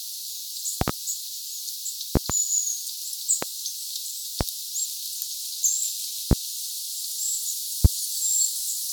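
Sharp loud pops cut through the sound six times: double pops at 0.81 to 0.91 s and 2.16 to 2.33 s, then single pops at 3.42 to 3.46 s, 4.41 to 4.44 s, 6.31 to 6.35 s and 7.85 to 7.88 s. Each peaks well above the surrounding level, roughly 20 to 25 dB louder, while the sound continues underneath. These are likely voltage steps or spikes from a plug, switch, static discharge or driver glitch entering the signal path.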